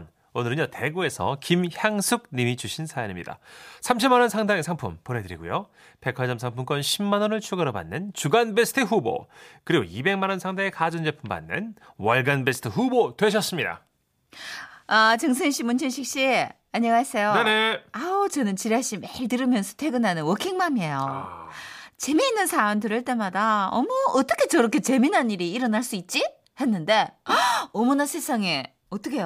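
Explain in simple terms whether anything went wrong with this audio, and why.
Nothing went wrong that a listener would notice; no technical problem stood out anywhere in this recording of speech.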